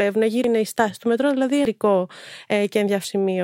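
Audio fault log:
0.44 s, 1.65 s and 3.04 s, compressed frames skipped: the speech jumps forward three times. The first comes just before "η στάση του μετρό", the second right after "στάση του μετρό δηλαδή". Whole frames were lost or rejected by the decoder. The gaps are roughly half a second, 0.7 s and 0.4 s, which fits runs of about five, seven and four 92.9 ms frames.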